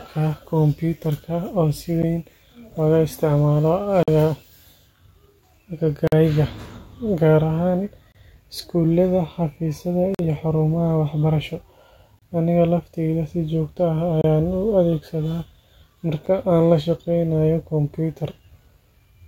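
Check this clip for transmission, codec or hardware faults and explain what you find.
The speech is repeatedly broken by short, hard-edged silent holes, about every 2 seconds: at 2.02 s (between "kumbuyuutarka oo si" and "weyn looga isticmaalo"), 4.03–4.08, 6.07–6.12, 8.12–8.15, 10.15–10.19, 12.19–12.22, 14.21–14.24, and 16.26 s (just before "aan la shaqeynayo"). They last roughly 10 to 50 ms. This is a gap between stream segments. The timestamps of consecutive 2-second segments don't line up, so the player pads each join with silence. The speech is intact on either side.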